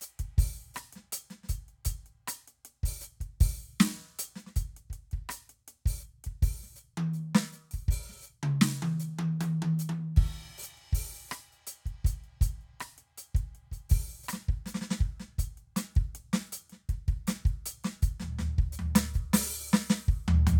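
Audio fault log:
No faults heard in this music.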